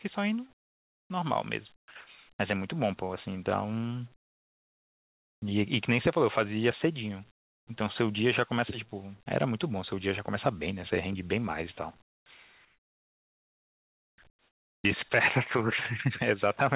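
Comfort noise in place of the background at 0.53–1.1, 1.76–1.88, 4.16–5.42, 7.31–7.67, 12.02–12.26, 12.65–14.18 and 14.3–14.84 s: pauses turn to steady, featureless hiss about 11–25 dB quieter, likely from discontinuous transmission.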